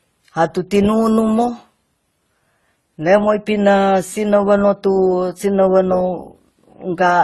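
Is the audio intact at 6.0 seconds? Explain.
No. At 6.0 seconds the speech carries transcoding between lossy codecs, present throughout the clip. It was likely encoded twice at low bitrate, with a second codec spending bits on the first codec's artefacts, so smeared, swirly distortion layers over a hard cut-off near 12.2 kHz.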